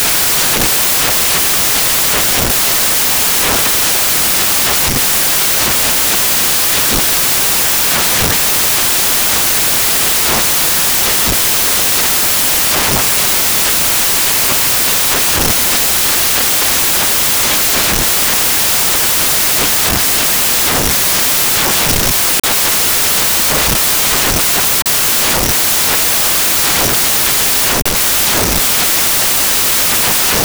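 From the first moment to the last, the speech is buried under samples built from the wrong bytes: the reader assembles each sample's bytes in the wrong order or at a shifted offset, so the rapidly changing low bits land in the most significant position. The result is loud, harsh broadband noise, close to white on the louder speech. Unlike added background hiss, it comes from the signal's own samples being scrambled rather than sitting at a steady floor.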